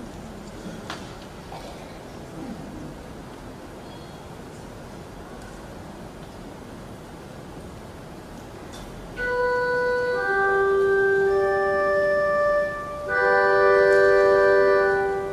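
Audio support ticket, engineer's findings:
No faults found in the audio for this support ticket.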